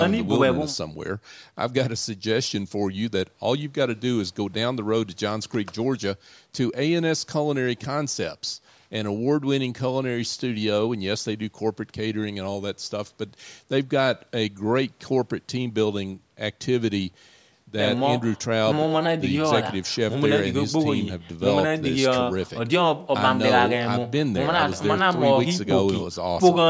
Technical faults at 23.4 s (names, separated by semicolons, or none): none